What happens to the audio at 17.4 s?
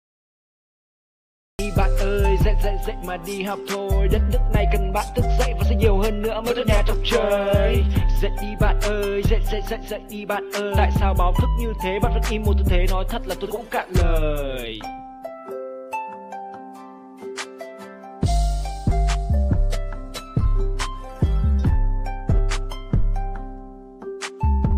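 Nothing goes wrong at 17.4 s; the audio plays through that moment intact, with no dropout, click, distortion or other fault.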